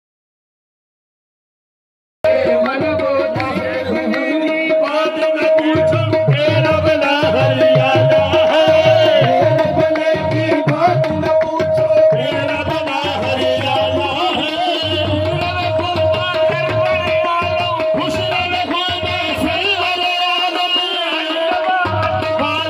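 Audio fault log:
0 to 2.25 s, audio dropout to silence: the clip opens in complete silence, with no room tone or background hiss at all, and the sound only comes in at about 2.25 s, arriving abruptly in mid-flow rather than building from quiet. The silence is already under way when the clip begins, so whatever was happening during it is gone. This is likely an input that was lost, through a disconnected device, a broken link or a mute, while the recorder kept writing silence.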